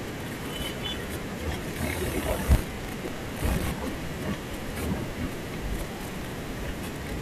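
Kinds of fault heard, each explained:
Processor overload crackle: the processor keeps missing deadlines for short buffers, so stale audio repeats in hard-edged slivers, giving gritty bursts at 2.46–3.71 s and 5.95–6.33 s.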